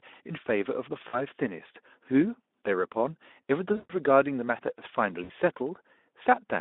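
At 1.07 to 1.23 s, 3.73 to 3.94 s and 5.23 to 5.31 s the speech, carried over a narrow Speex phone band, breaks into VoIP packet loss concealed by the speech codec. The decoder repeats its last pitch and filter state while lowering the gain. The gaps are about 60, 160 and 60 ms, which fits whole 20 ms frames. Each sounds like a smeared buzz fading toward noise and then recovering weakly. On a spectrogram this appears as flat, repeated harmonic bands. The waveform shows a decaying envelope.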